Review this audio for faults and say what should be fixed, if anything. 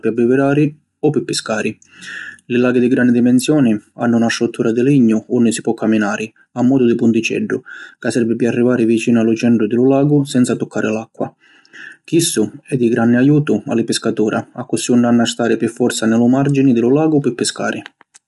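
Low-delay AAC compression runs throughout. The speech is rough and grainy, with noise filling the gaps between pitch harmonics and nothing above 11.7 kHz. Short frames resolve harmonics poorly, and the damage fits roughly 32 kbps, likely AAC-ELD. Unlike a simple low-pass, the graininess sits within the retained band. Raise the bitrate, or use a longer-frame codec where latency allows.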